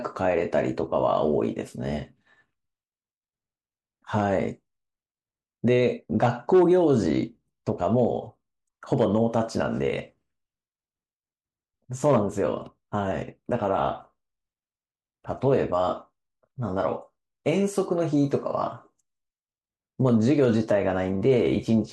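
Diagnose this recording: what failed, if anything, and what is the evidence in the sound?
Nothing failed in this recording, and the sound gives no evidence of any fault at any stage.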